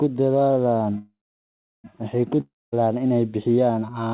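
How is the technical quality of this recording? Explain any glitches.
The recording has two gaps from network trouble, heard over telephone-band audio with nothing above 4 kHz, which fits a G.711 A-law call at 64 kbps.

Call audio freeze, 0.98–1.86 s: packets were likely held up and the jitter buffer emptied. The last sound stretches into a fading buzz, then about 0.7 s of silence, and the speech resumes exactly where it stopped.

Long network dropout, 2.41–2.74 s, just before "inay bixiyaan": likely lost packets. A brief fading buzz gives way to about 0.23 s of silence, and roughly 0.32 s of speech never returns.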